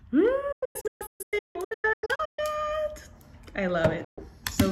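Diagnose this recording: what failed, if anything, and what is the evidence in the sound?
Reception failed, a digital broadcast dropout: the receiver rejected bad frames and muted. Between 0.52 and 2.39 s the sound breaks into repeated holes totalling about 1.2 s, none over 160 ms, each with an 8 ms fade. Another 128 ms hole opens at 4.04 s.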